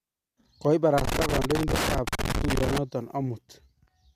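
Loose connector crackle runs from 0.98 to 2.78 s, nearly two seconds across the middle of the speech. A worn or dirty contact somewhere in the signal path is making and breaking as it shifts, so the audio is chopped on and off in rapid, uneven bursts, and any DC sitting on the line turns each reconnection into a pop. The result is an irregular scratching crackle laid over the speech until the contact settles.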